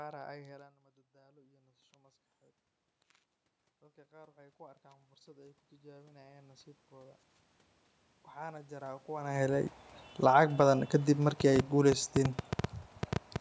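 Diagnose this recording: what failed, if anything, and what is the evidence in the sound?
Automatic gain rising is the fault in the call processing stage. At about 0.5 s the talker moves away, and the input falls about 18 dB. From 0.57 to 2.29 s the level climbs back by about 5 dB. From 4.09 to 7.28 s, after another drop of about 18 dB, it rises by about 12 dB. From 8.33 to 9.8 s it rises by about 7 dB. Voice and room noise swell together. The control is slowly compensating for a quieter input.

A train of clicks runs from 11.40 to 13.37 s. There are around fifteen ticks, about 6.7 per second, at an uneven pace. They peak roughly 10 dB above the sound and are heard through pauses too. The clicks share one shape. That points to something injecting pulses rather than the speech itself. The likely cause is interference reaching the analogue wiring, or a faulty connection or power supply.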